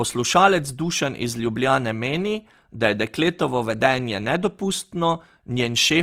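Opus compression is heard throughout the speech, from start to end. The fine detail of the sound has turned grainy and rough, with a noisy fizz where clean tones should be, and the damage is plainly audible. The likely cause is a low-rate encoder that keeps each band's overall energy but fills the spectral detail it cannot afford with folded or noise-like content. The character points to Opus's music (CELT) mode at roughly 24 kbps, still running full bandwidth.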